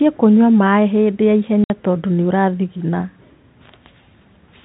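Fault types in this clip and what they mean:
Packet loss filled with silence: At 1.64 s the speech drops out abruptly for 60 ms, with hard edges where the sound stops and restarts at 1.70 s. The gap is pure silence, not muffled or smeared. Packets carrying that stretch never arrived, and the receiver inserted nothing in their place. The 60 ms length fits three consecutive 20 ms packets going missing over the narrowband G.711 telephone link.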